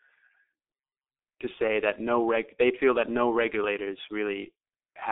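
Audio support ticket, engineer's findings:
G.723.1 codec, whole clip. Speech muffled and hoarse, consonants blurred, nothing above 3.7 kHz, line band about 250 Hz to 3.6 kHz. Heavy damage fits a roughly 6 kbit/s coder: 30 ms frames, voice model updating too slowly to track rapid articulation.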